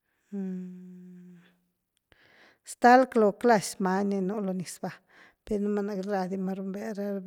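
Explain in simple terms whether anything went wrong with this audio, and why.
Nothing went wrong with this recording of speech that can be heard. No dropouts, glitches or other technical faults turn up anywhere in it.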